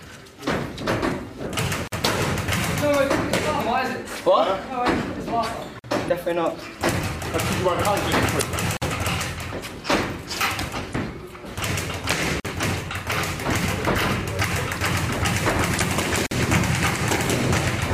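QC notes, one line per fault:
1.88 s, 5.79 s, 8.77 s, 12.40 s and 16.26 s: gap between chunks. Each is a hole of about 48 ms with hard edges, where the audio stops dead and resumes. This points to audio delivered in separate chunks, with silence inserted at each join by padding or a late start of the next chunk. Unlike damaged data, nothing foreign is added. The sound simply drops to silence and returns, with the same length every time.
3.57 s, 6.05 s, 8.38 s, 10.91 s and 15.77 s: damaged data in a compressed stream. Each is a short glitch of about 44 to 52 ms. Corrupted bytes make the decoder misread or reject frames and lose sync until it finds the next valid frame header. What separates these from the chunk gaps is that they come from corrupted frames rather than from chunk joins.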